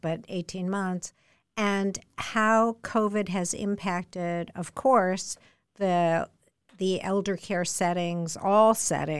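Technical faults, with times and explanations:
Nothing stood out as a technical problem on listening to the speech recording.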